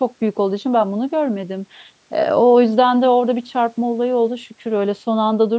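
Speech with no technical fault, its lowest bass trimmed by the call microphone's high-pass filter and nothing above 8 kHz, as expected from call microphone processing.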